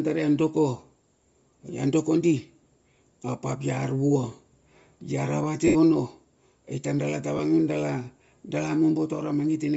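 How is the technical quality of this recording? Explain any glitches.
The recording has clearly audible codec damage throughout and three brief dropouts.

Across the whole clip the speech has a breathy, grainy edge, likely from Bluetooth LC3 compression at a low bitrate, around 32 kbps. The codec zeroes much of the upper spectrum and fills it with noise. On a spectrogram the highs look speckled and patchy rather than smoothly detailed.

Lost LE Audio frames occur at 2.64–2.66 s (20 ms), 5.67–5.75 s (80 ms) and 7.37–7.39 s (20 ms). Each time the decoder repeats the last spectrum with random signs, so the speech briefly smears into noise. The longest gap also fades toward silence. The spectrogram shows blurred vertical smudges there, and the waveform dips in level.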